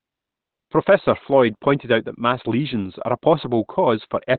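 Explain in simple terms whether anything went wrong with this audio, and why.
Opus compression, throughout: the speech sounds muffled and hoarse, with nothing above 4.3 kHz, likely because a starved encoder dropped into its narrow speech mode.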